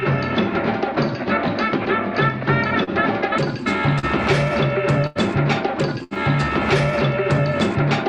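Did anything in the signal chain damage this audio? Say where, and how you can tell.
Yes. There is short concealed packet loss at the network stage, at 2.83 to 2.90 s and 3.99 to 4.06 s. Each is a brief smear where about 40 ms of music went missing. The decoder extended the preceding sound for roughly 36 ms, then crossfaded back into the real signal.

There is also a burst of packet loss at the network stage, at 5.07 to 5.18 s and 6.04 to 6.14 s. In each, about 80 ms never arrived. Concealment stretched the last sound into a fading continuation for 86 ms and 70 ms respectively, and the music then resumes further along with that stretch gone. All of this rides on an Opus call path whose top end stops near 12 kHz.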